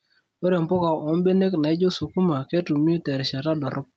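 A short speech clip with gain pumping throughout. The level swings by about 5 dB. Loud and soft parts sit close together, so the sound feels squashed. The likely cause is input gain set far too high, with a fast limiter or compressor pulling it down on every peak. The call path passes nothing above 8 kHz.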